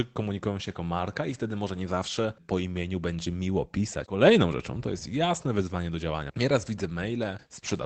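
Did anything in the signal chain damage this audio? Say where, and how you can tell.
No, nothing in the chain damaged this speech; it has simply been through a call path whose top end stops around 8 kHz, which fits Opus at roughly 24 kbps.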